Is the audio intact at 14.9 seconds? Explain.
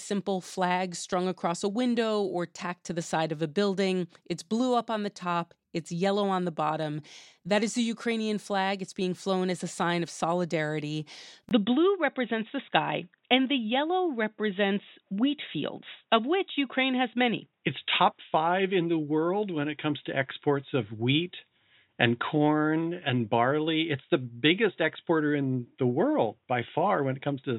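No. From 11.49 s to the end, audio is band-limited to 3.8 kHz, with a 20 ms gap at the switch, likely an input switched to a poorer device, sounding duller and boxier.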